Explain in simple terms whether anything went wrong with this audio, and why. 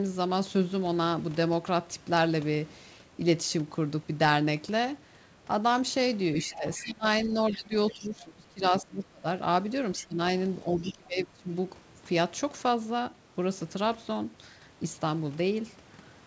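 Other side's voice leaking through appears from 6.41 to 6.85 s, again at 7.49 to 7.57 s, 9.96 to 10.06 s and 10.89 to 10.93 s. A second, much fainter voice slips in underneath the main speaker in short scraps. On a call, the speaker's device plays the far end through its loudspeaker, and the microphone hears it. The echo canceller is meant to strip that out, and it likely missed these bits.

Speech suppressed in double talk runs from 6.44 to 9.27 s, then 9.98 to 10.19 s and 10.73 to 11.49 s. The main speaker's voice sinks sharply or partly disappears, for about two seconds in the first stretch. Both people were talking at once, and the echo canceller couldn't tell its own speaker apart from the loudspeaker echo, so it turned everything down together. That overlap with the leaking voice is the likely trigger.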